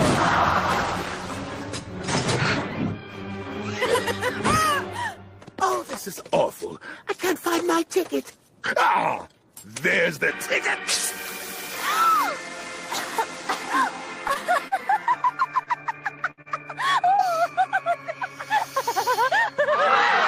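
From 14.27 to 17.28 s, repeated packet loss (robotic sound): seven gaps up to 68 ms, each patched by extending the preceding sound, leaving choppy audio with pieces missing.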